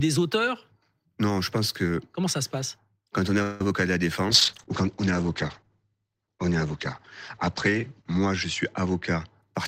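A speech recording with four call-path faults. At 3.42 to 3.61 s there is a call audio freeze, likely packets delayed until the jitter buffer emptied: the last sound is stretched into a fading buzz or hiss for about 180 ms, and the speech resumes intact, just later. Right after it, short concealed packet loss at 3.63 to 3.65 s and 3.69 to 3.71 s drops about 10 ms of audio each time, which the decoder patches over with brief smears. From 4.30 to 9.45 s a call bitrate drop sends the encoder from 32 to 13 kbps and its bandwidth from 20 kHz to 8 kHz, so the speech turns muffled, at its worst for nearly 4 s.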